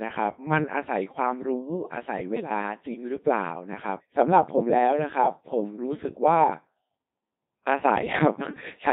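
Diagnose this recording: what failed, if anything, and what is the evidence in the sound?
At the codec stage, the speech passed through a Codec 2 vocoder at 2.4 kbit/s. Only pitch, voicing, energy and spectral envelope survive, and the decoder rebuilds everything from sine waves. The whole clip sounds heavily robotic and buzzy.

On the radio link, bit errors on digital voice radio strike from 2.36 to 2.50 s. The sound jumps in pitch, level and tone colour, warbling into gibberish. Flipped bits at a rate of a few percent corrupt frame parameters, which fits about four damaged frames.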